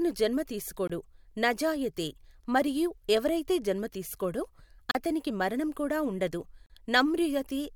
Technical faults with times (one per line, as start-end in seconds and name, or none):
0.87-0.90 block of digital silence
4.91-4.95 block of digital silence
6.66-6.70 block of digital silence